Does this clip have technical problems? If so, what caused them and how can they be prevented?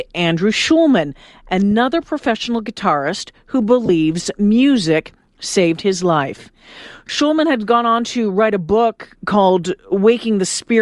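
Yes. Throughout the speech there is plainly audible Bluetooth LC3 compression: the upper frequencies have a breathy, grainy, noise-like texture instead of clean detail. This is likely the LC3 codec discarding much of the high spectrum and filling it with synthetic noise, at a quality that fits a bitrate around 48 kbps with 10 ms frames. To prevent it, use a higher LC3 bitrate or a wired or less compressed link.

There are also three short bursts of lost LE Audio frames. At 1.71 s, a 10 ms gap just before "professional guitarist who" turns the sound briefly rough and hissy. From 3.86 to 3.89 s, after "professional guitarist who" and before "music saved his life", a longer 30 ms smear fits three lost 10 ms frames. From 7.07 to 7.09 s, between "music saved his life" and "had gone on to", a 20 ms smear fits two lost frames. In each case the decoder repeats the last spectrum with randomised phase, so tonal detail collapses into a noisy blur. 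To prevent these, reduce radio interference and distance between the devices, or allow the link more retransmission time.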